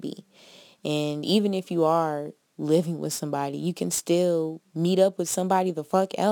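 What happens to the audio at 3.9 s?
At 3.9 s you're hearing the crude rate conversion that runs through the whole clip. Samples are being repeated rather than properly filtered, which fits a 44.1 kHz to 48 kHz change, leaving an inharmonic fizz some 25 dB under the speech that tracks its louder, brighter parts.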